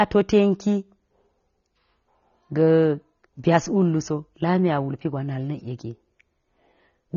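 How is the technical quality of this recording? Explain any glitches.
The recording suffers from plainly audible lossy compression throughout. From start to finish, this is likely AAC compression at a low bitrate, pointing to AAC-LC around 24 kbps. The encoder quantised the spectrum coarsely and removed everything above 6.9 kHz, leaving the speech dull and smeared, with a warbling, fizzy texture on sibilants and held sounds.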